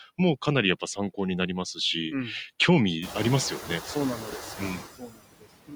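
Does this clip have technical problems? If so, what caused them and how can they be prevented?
Yes. Noise suppressor artifacts run throughout this speech. Steady noise is pulled down by about 19 dB, frame by frame, and the room noise rises near 3 s. Prevention: use a gentler suppression setting or reduce the noise at the source.

Speech cut by the noise suppressor occurs at 3.6 to 3.69 s, dipping about 11 dB, and at 4.79 to 5.48 s, dipping about 22 dB. Quiet speech was mistaken for noise and swallowed. Prevention: lower the suppression depth so faint speech is not classed as noise.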